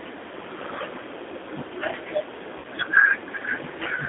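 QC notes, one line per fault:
throughout: G.729 codec. The speech is carried on a narrow telephone band of roughly 300 Hz to 3.6 kHz, with nothing above that. The damage is plainly audible, a rough, slightly synthetic grain that fits a G.729A stream at 8 kbit/s. This codec doesn't store the waveform. It rebuilds each 10 ms frame from a vocal tract filter, a pitch predictor and a handful of pulses, so fine detail is replaced by an approximation.
2.58–2.67 s: VoIP packet loss concealed by the speech codec. About 60 ms of audio is missing, which points to three lost packets. The decoder fills the gap by repeating its last pitch and filter settings at falling gain, and the sound smears out and fades. Each frame is predicted from the one before, so the voice stays weak or distorted for a short while after real packets arrive again.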